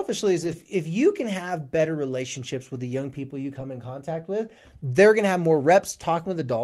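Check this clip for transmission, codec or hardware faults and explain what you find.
Two brief stretches of speech carry a lost packet rebuilt from error correction, at 0.43–0.53 s and 3.55–3.61 s. Packets went missing, but each following packet carried a low-bitrate copy that the decoder played, which fits three and two lost packets. Those moments turn rougher and noisier with no gap or smeared repetition, which sets this apart from ordinary packet-loss concealment.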